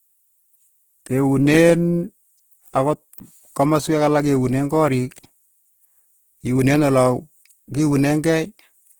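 Throughout the speech, plainly audible Opus compression damage, likely from a low bitrate around 16 kbps in CELT mode, makes the sound rough and grainy. Bands are filled with noise instead of detail. A spectrogram shows few holes, smeared texture, and energy reaching about 20.1 kHz.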